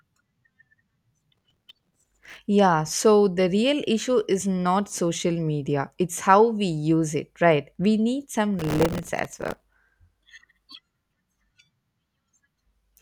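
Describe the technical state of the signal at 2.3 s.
At 2.3 s the speech is inside a burst of processor overload crackle (1.35 to 2.38 s): around 1.5 ms buffers repeatedly miss deadlines and replay stale audio, giving gritty tearing rather than one clean dropout.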